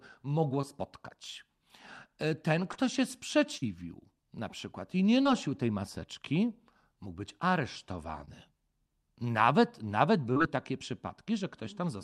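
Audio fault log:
0.61, 2.73, 5.23 (between "na przykład i nie" and "tej maseczki mógł być"), 8.25, 10.33 s: short concealed packet loss. About 20 ms never arrived; the decoder extended the preceding sound and blended back, causing brief smears.
3.57–3.66 s: burst of packet loss. About 40 ms went missing; the receiver prolonged and faded the last sound, then resumed slightly further on, skipping a sliver.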